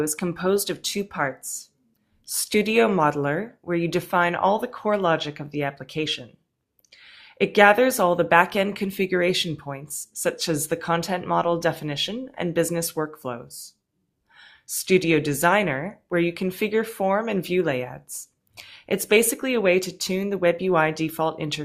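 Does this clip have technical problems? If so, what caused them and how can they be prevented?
No, nothing stood out on listening to this clip.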